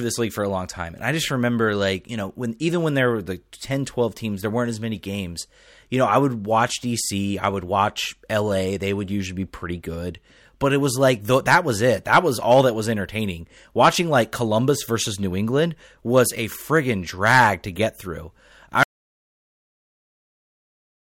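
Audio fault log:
18.83–21.07 s, audio dropout to silence: right after "to get through I" the speech stops mid-phrase and the signal falls to silence for the last 2.24 s. The likely cause is a lost input, with the recorder writing silence until it stopped. Unlike a pause or a fade-out, the sentence is cut off abruptly and even the room tone disappears. Unlike a clip that simply ends, the file keeps running through the dead air.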